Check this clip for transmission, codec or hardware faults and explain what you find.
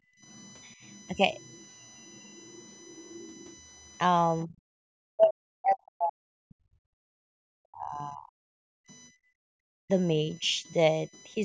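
Yes, there are faults in this speech clip: a constant USB whine, plus echo-canceller trouble in three forms: background gating, leakage of the far-end voice, and speech suppressed during double talk.

USB whine, throughout. Current drawn by the USB bus in 1 ms frames is getting into the audio through power or ground. That puts a fixed tone at 1 kHz under the whole clip, with a harmonic series that peaks at 14 kHz. It sits roughly 25 dB below the speech, so it is heard as a steady thin whine that does not follow the talker.

Background gated by the echo canceller, 0.00 to 0.21 s and 8.68 to 9.54 s. While the loudspeaker path was active, the canceller clamped the microphone hard. In the first stretch the room sound falls by up to about 27 dB for roughly 0.2 s. In the second it falls by up to about 40 dB, for around 0.7 s in total. Both are heard as the ambience cutting out and then coming back.

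Other side's voice leaking through, 0.22 to 3.59 s, 8.90 to 8.95 s and 10.45 to 11.22 s. The echo canceller likely left part of the loudspeaker signal in the microphone feed. A second, fainter voice shows through underneath. It is around 30 dB below the speech in the long first stretch, a brief scrap near 8.9 s, and around 35 dB down late in the clip.

Speech suppressed in double talk, 4.44 to 8.40 s, 9.82 to 10.64 s and 11.35 to 11.39 s. With both ends active, the canceller likely could not tell the talker from the echo and attenuated everything. Across the first span, about 3 s of speech dips, by as much as 40 dB at the deepest. Within the second span, about 0.3 s drops just as deeply. Near the end there is a slight dip of around 5 dB lasting 40 ms.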